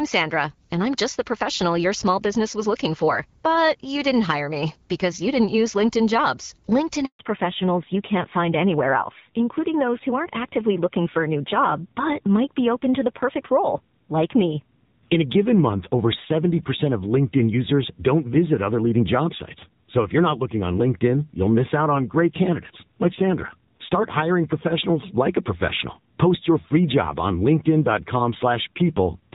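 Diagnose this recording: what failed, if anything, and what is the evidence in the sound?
A handover gap at the network stage: the speech dies away and is silent from 7.05 to 7.19 s, a 140 ms gap, as the call switched links.

A fallback to narrowband at the codec stage: from 7.19 s to the end, nothing above 4 kHz remains. Before the switch the audio is clear, which fits AMR-WB at 12.65 kbit/s. After it the sound is duller and rougher, which fits AMR-NB at 7.4 kbit/s. The cut-off is permanent and arrives right after the gap, unlike a brief filtering glitch.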